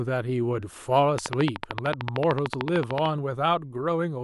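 From 1.19 s to 3.07 s, a steady ticking rides over the speech, carrying on through its pauses: a train of clicks at 13.4 per second, evenly spaced, around thirty in all, each much the same sharp pop and peaking well above the speech level, about 20 dB. A regular pulse like this is likely electrical interference from nearby equipment or a faulty connection or power supply injecting the same spike again and again.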